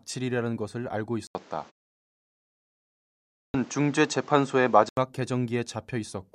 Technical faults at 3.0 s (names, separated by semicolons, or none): input switched to a poorer device; clipped start after a pause